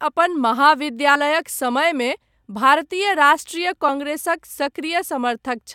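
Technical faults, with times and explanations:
1.14 s and 3.88 s, compressed frames skipped: the decoder lost whole compressed frames, so the audio jumps forward, by about two frames (roughly 50 ms) and then one (about 20 ms), consistent with frames of about 24 ms.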